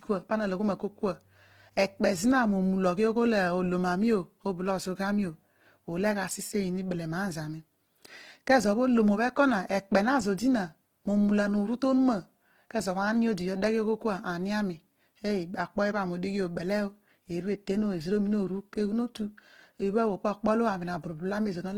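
Throughout, the speech carries plainly audible Opus compression, likely at a low rate near 16 kbps: grainy, rough noise-filled bands rather than MP3-style swirling, with bandwidth still reaching about 20.2 kHz.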